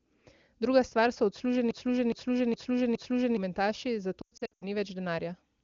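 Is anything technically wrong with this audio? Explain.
Yes, there are two faults in this speech.

Broken-record loop, 1.71 to 3.37 s: the same 415 ms fragment plays four times back to back, most likely because the player or stream stalled and kept resending its last buffer. The speech that belonged in that stretch is missing.

Lost AMR speech frames, 4.21 to 4.64 s: about 280 ms of frames are missing, scattered over 400 ms, with the longest gap 100 ms. The wideband decoder fills each gap by extending the last good frame at falling gain. This makes brief warbles and fades, and the voice sounds weak or rough as it recovers.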